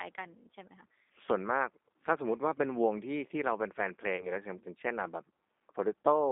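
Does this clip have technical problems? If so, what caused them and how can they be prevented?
Yes. Throughout the speech, the G.729 codec's damage is plainly audible: a rough, slightly synthetic tone confined to a line band of about 250 Hz to 3.7 kHz, which fits 8 kbit/s G.729A coding. On a spectrogram, energy stops sharply at 3.7 kHz, with smeared harmonics. Using a wideband codec such as G.722 or Opus prevents this.

From 4.16 to 4.31 s, VoIP packet loss concealed by the speech codec causes a brief, fading stretch. The decoder filled a gap of about 30 ms, which fits three lost 10 ms frames, by repeating its last pitch and filter at falling gain. The waveform shows a repetitive, decaying section, and the spectrogram shows stretched, fading energy. A jitter buffer with forward error correction, or a less congested network path, prevents this.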